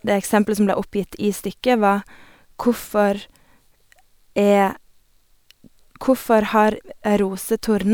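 Nothing goes wrong anywhere in this bit of speech; there's simply no technical fault to point to.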